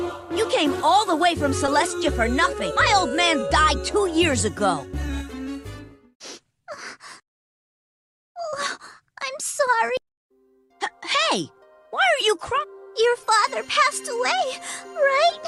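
Around 1.66 to 1.68 s and again 8.49 to 8.53 s there's short concealed packet loss: the receiver papered over roughly 10 and 30 ms gaps by extending the last sound, leaving a quick smear or wobble. Then at 10.64 to 10.70 s comes a burst of packet loss, about 50 ms gone, bridged by a fading continuation before the audio jumps ahead.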